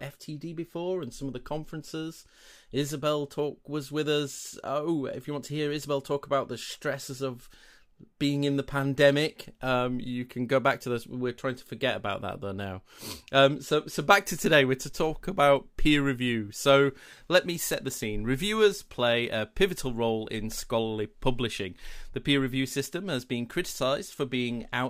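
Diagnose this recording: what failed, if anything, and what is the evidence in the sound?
Nothing failed: the sound carries no evidence of a fault at any stage of the recording.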